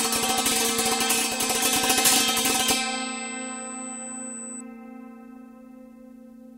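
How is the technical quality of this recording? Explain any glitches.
There's one clear problem. USB whine runs from 0 to 4.61 s: a steady 8 kHz tone, fairly loud, from the bus's 125-microsecond microframes leaking through power or ground.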